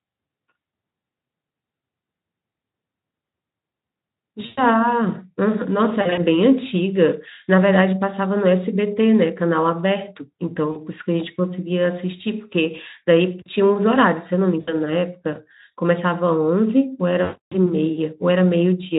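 At 4.45–4.64, 6.01–6.22, 10.71–10.76, 14.59–14.80 and 17.23–17.58 s the speech shows VoIP packet loss concealed by the speech codec. The decoder, Speex at about 18 kbps, fills missing packets by stretching its last pitch and filter into a buzzy tone or coloured noise that fades, which fits losses in 20 ms steps. The longest gap, near 17.2 s, decays furthest, and the voice stays weak briefly after each gap.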